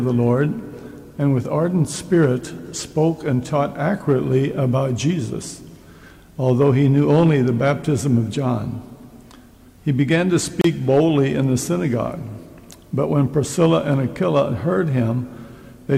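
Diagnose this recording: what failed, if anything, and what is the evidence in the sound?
The failure is at the codec stage: a gap at a join of encoded pieces. Continuous sound drops into a 30 ms gap from 10.61 to 10.64 s, with smeared edges, then resumes where it stopped. Separately encoded pieces were joined untrimmed, leaving encoder delay and final-frame padding.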